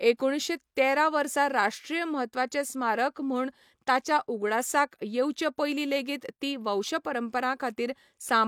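No technical faults can be heard anywhere in the recording: the signal stays continuous and stable throughout.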